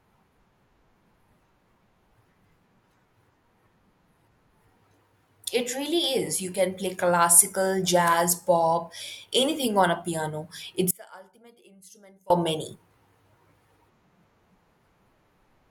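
Likely a loss of the signal feed while the path stayed live: just after "anything on a piano", from 10.91 to 12.30 s, an audio dropout to a faint residue leaves only faint sound about 30 dB down.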